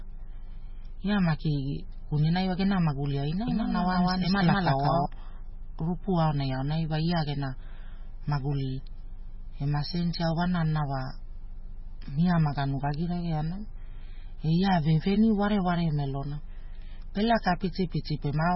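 From the start and throughout, the speech carries heavy MP3 compression damage, likely from encoding at a very low bitrate, which fits something near 16 kbps. Nothing is present above 5.6 kHz, so the top of the sound is cut off sharply and sibilants lose their edge. Starved of bits, the encoder drops weak frequency lines that flicker on and off between frames, giving a watery, swirling texture, metallic chirps on s sounds, and smeared attacks.

From 3.48 s to 5.06 s a doubled audio track appears, likely from the same signal being captured twice through paths of different speed. A second full-band copy trails the original by about a fifth of a second at roughly equal loudness, so every syllable is heard again as a distinct, undecayed repeat with no room colour. The copy cuts in and out abruptly at both boundaries rather than fading.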